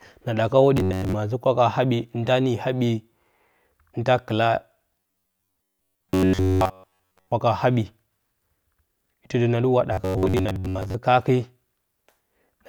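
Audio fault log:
0.77–1.14 s, 5.00–7.32 s, 9.93–10.95 s: robotic sound from repeated short buffers. The speech collapses into a rigid metallic buzz locked near 93.8 Hz, likely from a chunk of about 10.7 ms being replayed while most incoming audio is skipped; the words remain loosely traceable.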